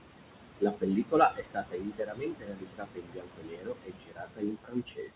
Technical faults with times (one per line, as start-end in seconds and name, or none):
0.00-5.15 noise suppressor artifacts
0.60-5.15 speech cut by the noise suppressor